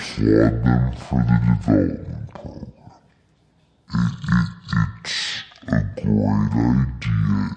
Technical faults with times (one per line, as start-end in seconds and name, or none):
0.00-7.56 wrong sample rate